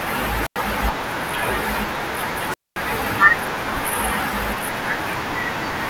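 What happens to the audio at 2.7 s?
At 2.7 s the speech sits inside a wireless microphone squelch dropout running from 2.46 to 2.80 s. The radio link fades, hiss swells, then the receiver's squelch mutes output for about 224 ms: a flat waveform gap and blank spectrogram band preceded by broadband noise.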